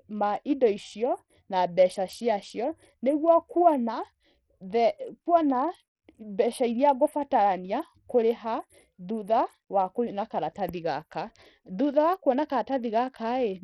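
Bluetooth SBC compression runs throughout this speech clip: dull, flickering treble and gritty aliasing noise, likely from a starved bit pool around 64 kbps coarsely quantising the sub-bands.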